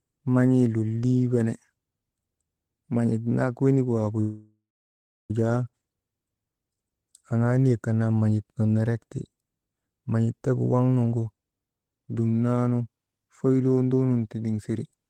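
A speech recording with two timing faults. From 4.20 to 5.31 s there is a call audio freeze. The last sound is drawn out as a fading buzz or hiss that decays into about 0.68 s of silence. Speech then resumes exactly where it stopped. That distinguishes it from packet loss, where content is skipped. Here nothing is lost and about 1.1 s of gap is inserted, which pushes everything after it later. The likely cause is delayed packets that let the jitter buffer run dry. From 10.72 s to 15.04 s a jitter buffer speed-up follows, with the speech running at about 110% of normal rate. Across that stretch the receiver trims roughly 0.4 s by cutting many tiny pitch-period slices to pull the excess delay back down. The talker sounds hurried, yet the pitch stays where it was. That unchanged pitch separates this from a resampling or clock error, which would raise the voice along with the speed.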